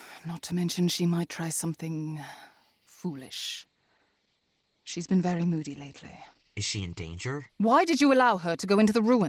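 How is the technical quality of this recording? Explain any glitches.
The recording has one glitch: a call bitrate drop. At 3.61 s the bitrate falls from 32 kbps to about 12 kbps and stays low to the end. The encoder must spend far fewer bits. It codes coarsely and trims the bandwidth from 20 kHz to 8 kHz. The speech turns rough and muffled.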